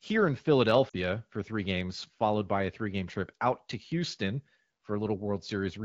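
A speech clip carried over AMR wideband (HD Voice) at about 12.65 kbit/s, with lost AMR speech frames from 0.89 to 0.96 s. For those 40 ms, which fits two 20 ms frames, the decoder repeats the last good pitch and vocal tract settings at falling gain, so the speech briefly smears and dips. This differs from a plain dropout, which cuts to silence with a click, and from a repeated-buffer glitch, which stutters.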